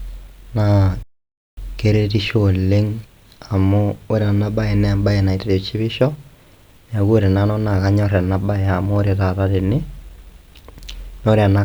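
A speech clip in which the sound cuts out abruptly at 1.03 s and stays silent for about 0.55 s before resuming at 1.57 s, a playback stall likely caused by the player running out of data or its thread being blocked.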